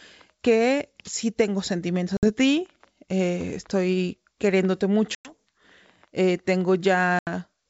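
Speech over a G.722 wideband call has packet loss on an ADPCM call: sharp silent holes at 2.17–2.30 s after "que sí tengo", 5.15–5.33 s after "ti eh estoy queriéndote", and 7.19–7.29 s. Unlike a plain dropout, the sound returns slightly distorted because the decoder's predictor has drifted from the sender's.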